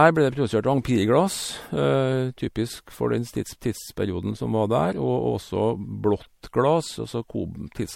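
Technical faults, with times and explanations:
Throughout: generation loss. The speech is swirly, smeared and hollow, with blurred attacks and nothing above 16.5 kHz. The likely cause is about three MP3 passes near 64 kbit/s, each requantising on a shifted frame grid, so noise and spectral holes pile up.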